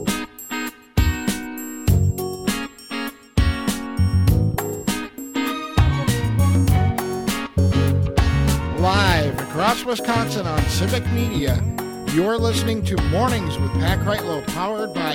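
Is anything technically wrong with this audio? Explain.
Yes. From 6.16 s to 11.15 s there is periodic clock jitter. The converter's sample clock is being shaken at a steady rate of around 1 kHz. That timing wobble adds sidebands above and below every component of the sound, spaced by that rate. Higher frequencies are hit harder. The result is a rough, metallic edge laid over the audio during those five seconds. It disappears whenever the sound stops, since silence has nothing to modulate.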